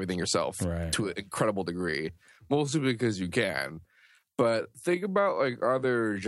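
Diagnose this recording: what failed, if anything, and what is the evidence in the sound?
From 1.71 s, just after "right to an incredible", to the end of the clip, the speech abruptly drops to about 0.67 times its earlier pace while the pitch stays put. The slowed stretch drags. The stage is software processing, likely a time-stretched section, where short segments were repeated to lengthen the audio while holding pitch.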